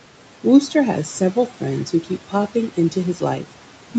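A speech recording carries noise suppressor artifacts for its whole length. The suppressor pulls the steady room noise down by about 12 dB, so the noise drops away in the gaps and swells back under each phrase. Unlike a noise gate, which snaps the background fully off and on, this pumping is gradual and frequency-dependent. The room noise sits about 19 dB under the voice, and the audio stops at 8 kHz, as a call path would limit it.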